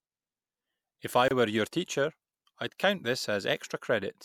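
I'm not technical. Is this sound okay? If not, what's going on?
No. At 1.28 s the speech briefly drops out for about 27 milliseconds, until 1.31 s, just before "were your teacher I'd". This is a gap at a join of encoded pieces. The recording was saved in separate chunks and stuck together. Each chunk kept a sliver of silence at its edge.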